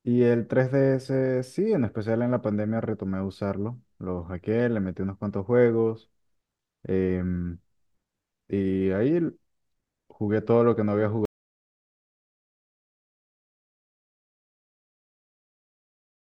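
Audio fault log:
11.25 to 16.28 s, audio dropout to silence: speech cuts off mid-flow into silence with no room tone through to the end, likely a lost input.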